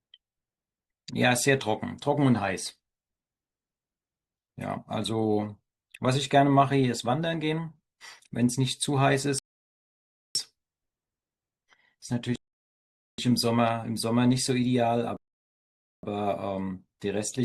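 Rebuffering stalls at 9.39 s, 12.36 s and 15.17 s halt the speech for about 0.97 s, 0.83 s and 0.86 s. Playback ran out of downloaded audio and waited. Each silence resumes exactly where it stopped, adding time, unlike a dropout, which skips audio.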